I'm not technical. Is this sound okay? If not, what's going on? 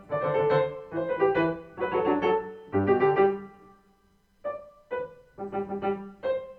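Yes, nothing in this recording points to a technical problem with how the sound was captured or passed along.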